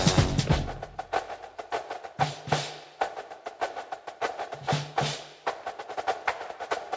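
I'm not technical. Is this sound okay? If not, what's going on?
Yes, nothing is wrong with this sound. It has gone through a call's normal microphone processing, so the very highest treble stops at around 8 kHz, which is expected for a call.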